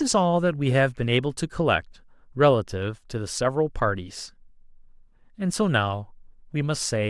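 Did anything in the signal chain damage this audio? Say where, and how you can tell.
No, nothing in the chain has audibly damaged this speech recording. There is no moment in the audio where the signal is disturbed or interrupted.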